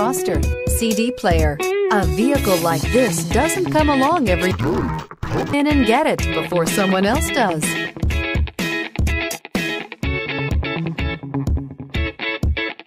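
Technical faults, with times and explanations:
4.51 to 5.54 s, interleaved audio read as planar: the sound turns dull and robotic and buzzes at about 86 Hz, a rate of one block every 11.6 ms, which fits a 512-sample buffer. Alternating left and right samples in each block were split into halves and played together at half speed, so the pace holds. Because the blocks are this short, there is no clear octave drop, unlike a pitch-shift fault; the steady buzz at the block rate is the giveaway.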